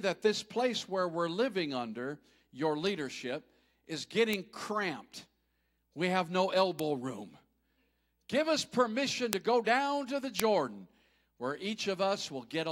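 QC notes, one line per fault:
4.33, 6.79, 9.33 and 10.40 s: bit error spike. A flipped bit jumps one or two samples to about -10 to -4 dBFS, giving sharp broadband ticks.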